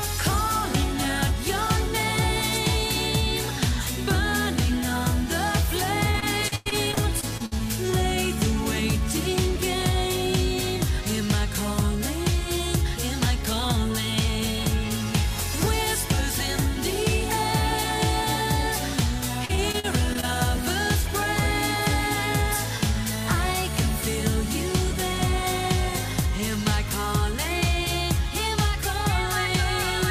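From 6.11 s to 7.61 s there is repeated packet loss with the robotic sound it brings: a dozen or so dropouts, the longest about 99 ms, each bridged by extending the preceding audio, so close to a quarter of that stretch is synthetic fill. The sound turns choppy, with pieces missing. It recurs from 19.45 s to 20.25 s with fewer, shorter holes of up to 40 ms, concealing about a fifth of the span.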